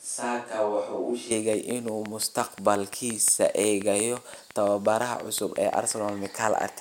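From the start of the speech until 1.31 s, the close microphone's feed was likely missing, leaving only a distant microphone: the speech sounds hollow and roomy, with thinner bass, a level around 5 dB lower and room noise roughly 35 dB below the speech, before the close sound returns abruptly.

From 1.53 s to 6.63 s, a train of clicks is present, likely from interference or a faulty connection injecting pulses. About thirty near-identical clicks arrive at a regular 5.7 per second, peaking around 10 dB above the signal, and they tick audibly through speech and pauses alike.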